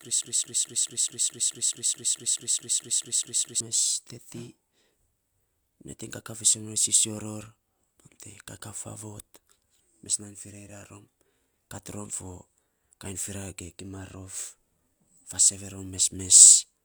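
From the very start until about 3.6 s, the speech is caught in a broken-record loop that is already under way when the clip begins. A fragment of about 215 ms repeats back to back, identically, 16 times, before normal speech resumes with "mes teti". The likely cause is a player or stream stall that kept resending its last buffer. Unlike an echo, the copies never decay, and unlike a dropout, the lost stretch is filled with repetition instead of silence.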